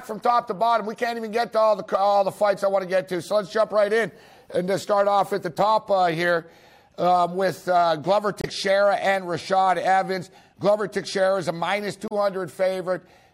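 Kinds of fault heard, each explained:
Damaged data in a compressed stream: Corrupted bytes make the decoder misread frames and lose sync while it hunts for the next header. Short blips are heard at 5.55 s, 8.40 to 8.45 s and 12.07 to 12.12 s, the last adding 12 ms.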